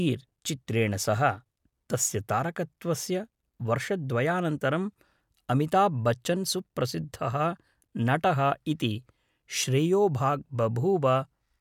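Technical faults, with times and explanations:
No technical faults detected.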